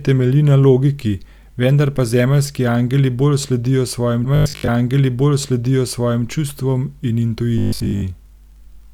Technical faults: stream segment repeated; robotic sound from repeated short buffers

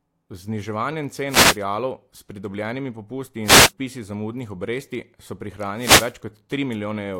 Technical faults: wireless microphone noise hit

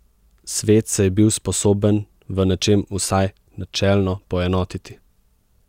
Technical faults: none

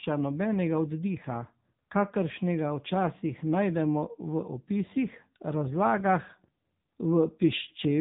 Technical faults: AMR narrowband mobile codec

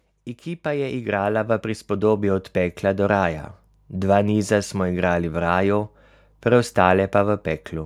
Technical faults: automatic gain rising

